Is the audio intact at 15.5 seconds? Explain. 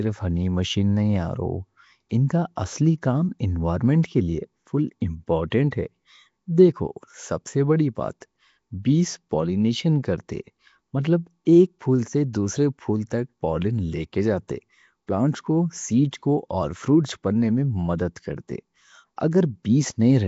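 No. At 15.5 s, as everywhere in the clip, the speech has a rough, hissy halo and a smeared, underwater quality, with nothing above 7.7 kHz. This likely comes from Nellymoser compression, which fills weak bands with noise. The damage fits a rate near 32 kbps.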